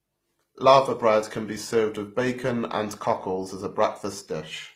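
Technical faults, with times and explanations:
Throughout: transcoding between lossy codecs. Nothing remains above 16 kHz, and two layers of coding artefacts sit together in the speech, which points to a low-rate HE-AAC encode likely re-encoded as Opus, the second codec spending bits on the first's damage.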